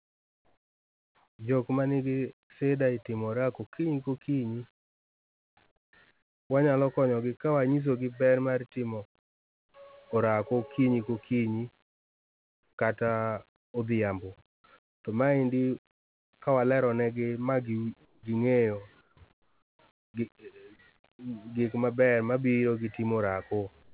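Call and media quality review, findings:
Comfort noise in place of the background: real room sound drops out into flat, featureless hiss at 0–1.39 s (before "jok ma nigi shida"), 4.8–6.5 s, 9.19–9.74 s, 11.83–16.33 s, 18.05–20.14 s and 23.83 s to the end. The hiss sits about 6–20 dB quieter. Likely sender-side discontinuous transmission, with the receiver synthesising noise during the pauses.

Onset clipped by the voice detector: sound starts abruptly, with its soft attack missing, at 5.91 s and 14.62 s, about 20 ms cut each time. Likely a slow voice activity detector on the sender, with comfort noise filling the gap. The narrowband path has nothing above 4 kHz, consistent with G.711.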